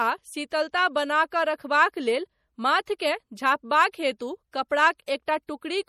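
A speech recording that was likely squeezed through low-bitrate MP3 compression, consistent with roughly 48 kbps, so nothing survives above 16.1 kHz and the sound turns watery and swirly throughout. Pre-echo from the codec spreading quantisation noise across a block puts a short hiss just ahead of sharp attacks at 2.86, 2.99 and 5.06 s, softening each onset.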